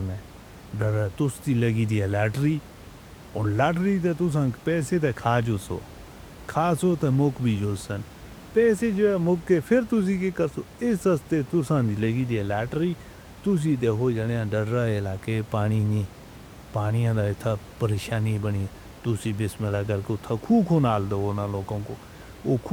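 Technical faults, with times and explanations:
No technical faults.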